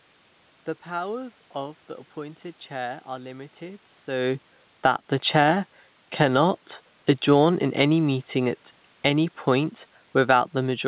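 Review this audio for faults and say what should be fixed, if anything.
Automatic gain falling, 7.13 to 10.88 s: judging the input too loud, or its background noise too strong, the gain control slowly lowers it, so the room noise sinks along with the speech, unlike a talker moving away. Setting the input level lower, or giving the gain control a higher target, would stop it from having to back off.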